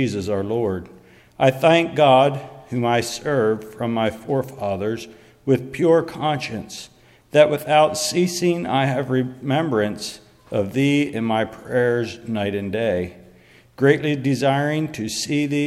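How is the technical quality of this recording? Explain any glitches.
No glitches or technical faults can be heard here.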